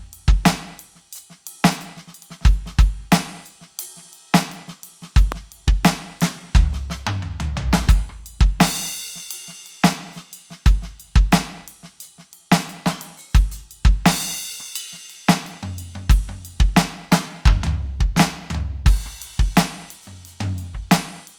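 A voltage spike, likely from a plug, switch or static discharge, puts one loud pop into the music from 5.32 to 5.34 s, around 10 dB louder than the music.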